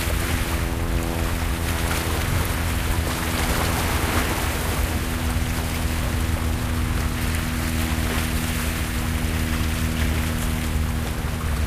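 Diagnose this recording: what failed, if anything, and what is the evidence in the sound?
Crude rate conversion at the sample-format conversion stage, from 5.13 s to the end. A gritty, inharmonic fizz tracks the louder, brighter sound. This fits a 32 kHz to 44.1 kHz nearest-sample conversion: repeated samples leave a patterned error only about 20 dB down.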